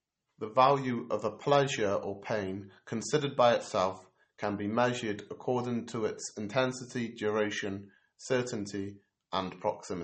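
From start to finish the speech has a watery, swirling quality, with a metallic chirp on the s sounds and smeared consonant onsets, and nothing is heard above about 8.4 kHz. This is plainly audible damage from MP3 compression, likely at a low bitrate that fits roughly 32 kbps. Short of bits, the encoder removed the treble above that cut-off and zeroed weak frequency lines, which flicker on and off between frames.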